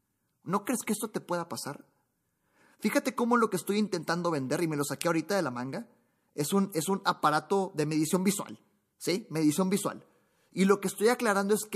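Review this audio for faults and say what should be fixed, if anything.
Pre-echo appears at 0.66 s, just before "crees que esto te". A short hiss rises about 12 dB over the quiet gap. It spreads roughly 13 ms ahead of the attack. The codec used a long 36 ms block and never switched to short blocks. Enabling block switching on transients would prevent it.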